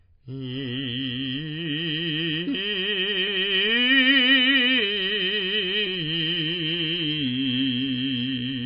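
MP3 compression damage runs through the whole music clip: nothing survives above 5 kHz, and the remaining sound swirls and warbles as weak frequency lines drop in and out between frames. The likely cause is an encoder starved of bits, which fits a rate near 24 kbps.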